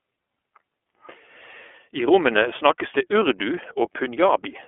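Throughout, the speech has passed through the iLBC codec, which squeezes it into a telephone band of roughly 300 to 3400 Hz and codes each frame independently. Nothing reaches above 3.7 kHz, and the plainly audible coding leaves the speech rough and synthetic, consistent with 30 ms frames at about 13.3 kbps.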